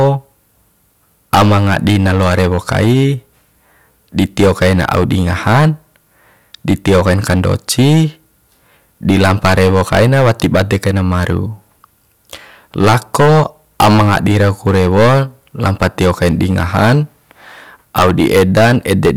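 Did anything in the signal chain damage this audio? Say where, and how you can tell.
Yes. Hard clipping runs through the whole speech clip. The input is overdriven by about 19 dB at a converter or fixed-point conversion, so a few percent of samples flatten against that stage's limit. The result is harsh, broadband fuzz on every loud syllable, not the rounder distortion of soft saturation.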